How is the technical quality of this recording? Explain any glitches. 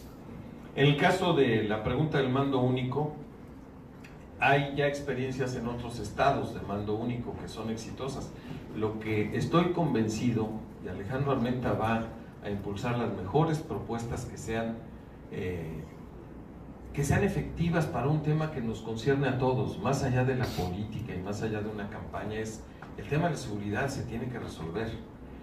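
The technical quality holds up, with no glitches to explain anywhere in the recording.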